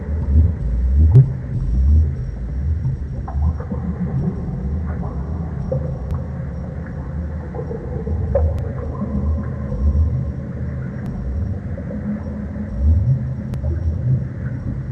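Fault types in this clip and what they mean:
Audio missing between chunks: six tiny skips of roughly 20 ms, repeating about every 2.5 s from 1.15 s to 13.54 s, likely from processing in 2.5 s blocks that drops a sliver at each handover; the waveform shows an abrupt seam with no gap, the spectrogram a thin vertical discontinuity.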